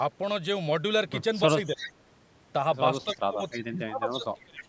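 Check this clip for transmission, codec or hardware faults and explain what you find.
Two fault types are present, both tied to echo cancellation during overlapping talk, with band-limiting at 8 kHz from normal call microphone processing.

Speech suppressed in double talk occurs at 1.75–1.86 s, dipping roughly 10 dB, and again from 3.04 s to 4.68 s, dropping as far as roughly 25 dB over about a second and a half. The likely cause is an echo canceller that could not distinguish local speech from loudspeaker echo and attenuated both.

Echo leak appears at 1.76–1.93 s, about 10 dB below the speech, and briefly at 4.58–4.62 s, about 15 dB down. A delayed copy arrives 297 ms behind the original, likely residual loudspeaker pickup that the far end's canceller failed to remove and sent back.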